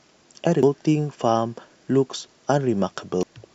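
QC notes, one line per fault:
0.63 s and 3.23 s: compressed frames skipped. The speech jumps ahead by about 0.7 s, then about 0.2 s. These jumps span about 10 and 2 frames of 93 ms, consistent with whole frames missing or rejected by the decoder.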